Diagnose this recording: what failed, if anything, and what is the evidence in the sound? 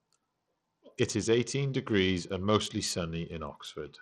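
The codec stage is at fault: the speech was likely squeezed through Bluetooth SBC compression, and the damage is plain throughout. The upper bands get starved, so treble thins and flickers while a gritty quantisation noise and aliasing cling to the voice, which fits a low bit pool around 80 kbps.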